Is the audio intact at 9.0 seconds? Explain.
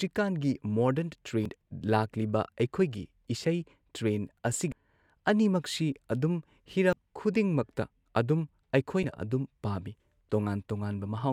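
No. Damaged data in the compressed stream hits the speech from 9.01 to 9.04 s. The decoder misreads corrupted frames and loses sync, producing a brief chirp, squawk, click or short hole.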